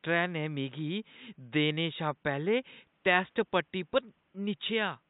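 No faults are audible in the speech; the only other sound is the room's own background noise, sitting about 45 dB below the voice as part of the recording.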